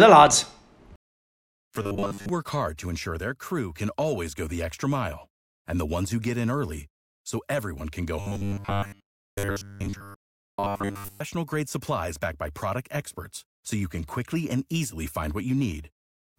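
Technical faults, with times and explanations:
1.82 to 2.29 s and 8.20 to 11.20 s, robotic sound from repeated short buffers: the speech turns into a rigid, metallic buzz fixed at 100 Hz, still loosely tracking the words, briefly at first and then for a full 3 seconds. This likely comes from new audio arriving too seldom, so the software keeps replaying a roughly 10 ms slice, which sets the 100 Hz pitch, while most of the real speech in those stretches is skipped.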